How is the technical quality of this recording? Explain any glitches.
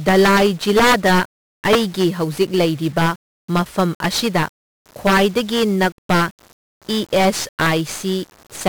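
The recording is technically poor: the speech runs through a heavily degraded 1-bit codec, carries a faint computer-generated buzz, and is broken up by repeated integer overflow cracks on its loudest passages.

Integer overflow occurs at 0.08–1.21 s, 1.65–2.04 s, 2.99–3.08 s, 3.57–4.42 s, 5.07–6.22 s, 7.16–7.72 s and 8.67–8.69 s. The signal was driven past the integer ceiling by about 2 to 8 dB. The worst cases are about 8 dB, in the first and fifth stretches. Instead of being limited at the top of the range, each excess peak wrapped around to the opposite extreme. This produces violent, hard cracks on the loud speech, far harsher than ordinary clipping.

1-bit DFPWM compression affects the whole clip, and the damage is heavy. Each sample is reduced to a single up-or-down bit that nudges an adaptive level, which fits a 48 kbps DFPWM stream. The resulting quantisation error is strong and broadband. 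The speech sounds fuzzy and crackly, with the treble buried under hiss even though content reaches up to 21.4 kHz.

Computer activity noise also runs throughout. It is a buzzy pulsing at around 70 Hz, sitting roughly 40 dB below the speech. Changing processor or peripheral load shifts the shared ground that the audio circuit references, and that ground fluctuation leaks into the signal. The buzz follows the machine's activity rather than the speech, so it keeps going independently of what is being said.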